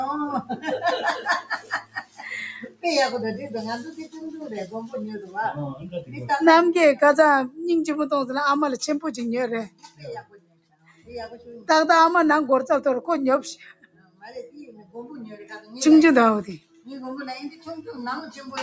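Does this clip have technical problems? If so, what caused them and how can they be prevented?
Yes. Throughout the clip the level pumps and flutters: sudden onsets come through while sustained parts and their tails sink, with a swing of around 10 dB. This is a noise suppressor applied to music or sounds. A suppressor tuned for speech mistakes steady tones and ambience for background noise and pulls them down. To prevent it, disable noise suppression or switch the call to a music or original-sound mode before sending non-speech audio.

Sound cut by the noise suppressor is clearest at 0.42–0.65 s (about 10 dB down), 1.42–2.84 s (about 16 dB), 3.9–4.18 s (about 14 dB), 5.25–6.14 s (about 12 dB), 9.68–11.69 s (about 16 dB), 13.73–15.73 s (about 16 dB) and 16.58–16.88 s (about 14 dB). In these stretches held or decaying material sinks in level or has its decay cut short. The same fix applies: keep speech-oriented suppression off this kind of audio. 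The call's microphone processing, with nothing above 8 kHz, is expected and not part of the problem.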